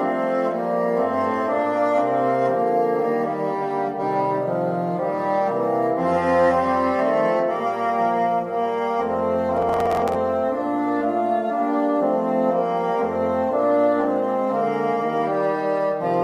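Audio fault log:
9.57–10.15 s, processor overload crackle: for just over half a second a gritty, tearing crackle rides on top of the sound and then stops cleanly. The processor is falling behind and missing a run of buffer deadlines. Each miss replays a scrap of old audio with hard edges, so the continuity breaks repeatedly. The density of the crackle points to roughly twenty missed buffers of about 10 ms each, clustered within the overload.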